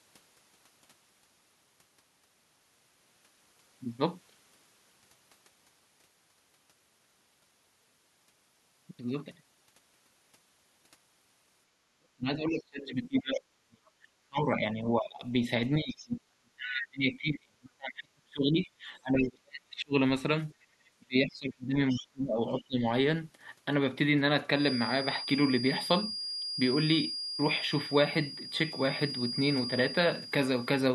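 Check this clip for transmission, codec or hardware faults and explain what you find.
Echo-control and acoustic-loop faults affect this speech clip, four kinds in all.

Speech suppressed in double talk occurs from 11.95 to 15.24 s, 15.80 to 19.94 s and 20.98 to 22.83 s. The talker's voice sinks, thins and breaks into pieces, falling by roughly 35 dB at its deepest in the first two stretches and about 30 dB in the third. The likely cause is both ends talking at once: the echo canceller could not tell the local voice from loudspeaker echo and attenuated everything.

The other side's voice leaking through appears as brief scraps from 13.87 to 13.91 s, 15.97 to 16.04 s and 21.90 to 21.97 s. The first is very faint, around 40 dB under the speech. The later two are more audible, roughly 25 dB down. Each is a fragment of a second voice. This is likely far-end audio from the loudspeaker that the canceller failed to remove fully from the microphone, escaping during the double-talk periods.

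Background gated by the echo canceller shows up from 20.55 to 20.70 s. The room tone ducks by about 16 dB for some 150 ms, then recovers. The canceller clamped the microphone hard while the loudspeaker was active, so the ambient bed briefly dipped before the suppression released.

A feedback whistle runs from 24.51 s to the end of the clip. It is a steady, thin tone at 4.8 kHz sitting roughly 10 dB below the signal, swelling and fading slowly in level. It likely comes from a loudspeaker-to-microphone loop poised just at the feedback threshold, so one frequency rings on continuously without building into a full howl.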